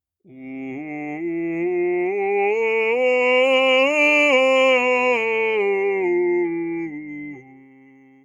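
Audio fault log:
Throughout: noise suppressor applied to music or sounds. A suppressor tuned for speech is treating this music as if it were noise. Held tones and ambience get pushed down, while the fronts of sounds mostly pass untouched. The gain keeps moving, with swings of roughly 15 dB. That makes the music pump and flutter. Sustains thin out, and tails sink faster than they should. The room and the body of the sound lose weight.
7.26 to 8.24 s: sound cut by the noise suppressor. Here the suppressor clamps down harder than anywhere else. The level drops by up to about 19 dB, and the cut runs to the end of the audio. Whatever is sustaining or fading in this stretch gets judged as noise and pulled under. Its decay is chopped short instead of dying away naturally. Only sharper onsets hold some presence.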